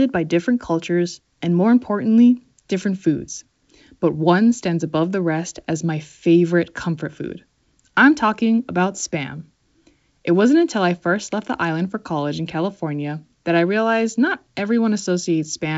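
No technical faults can be heard in this speech clip. It carries G.722 wideband telephone coding at 64 kbit/s, with the band ending near 7.7 kHz and at most a faint trace of the coding itself.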